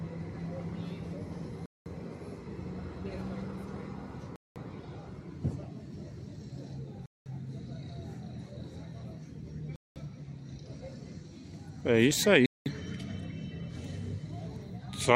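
Hard-edged silent holes, each 200 ms long, open at 1.66, 4.36, 7.06, 9.76 and 12.46 s. This is a gap between chunks: the audio plays as 2.5 s pieces with silence inserted at every join, so the sound stops every 2.7 s.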